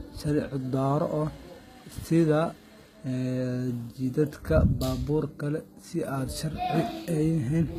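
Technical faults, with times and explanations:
Throughout, HE-AAC compression, likely the cause of the gritty, lispy s sounds in this speech: the treble is rebuilt from copied lower bands rather than coded, so harmonics don't line up. Everything stops at 14.9 kHz, and the damage fits a bitrate of about 20 kbps.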